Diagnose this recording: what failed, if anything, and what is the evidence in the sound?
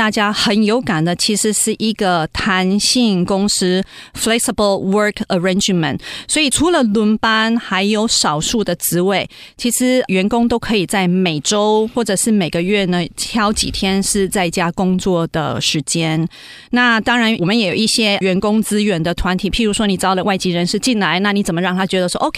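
Nothing failed; no fault is audible anywhere in this speech.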